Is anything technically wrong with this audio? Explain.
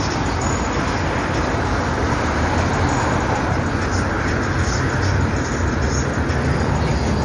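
Yes. Throughout, the sound has no content above 10.6 kHz and a plainly audible watery, swirling texture with smeared attacks. This is likely MP3 compression at a low bitrate, consistent with about 40 kbps, where the encoder cuts the treble and drops weak frequency components that flicker between frames.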